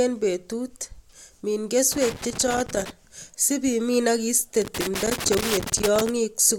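A speech clip broken twice by irregular bursts of scratchy crackle, first from 1.92 to 2.90 s, ending just before "sib imin ak iste", then again from 4.62 to 6.09 s, right after those same words. This is loose connector crackle: a worn or dirty contact in the cable or jack keeps making and losing connection as it shifts, chopping the signal erratically and popping wherever DC sits on the line.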